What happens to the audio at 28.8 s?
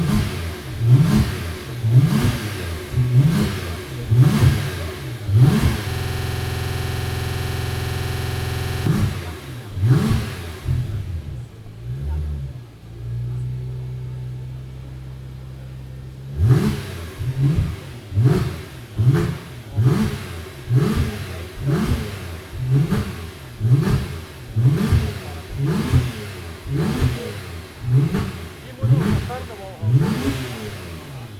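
Nothing goes wrong at 28.8 s; the audio plays through that moment intact, with no dropout, click or other fault.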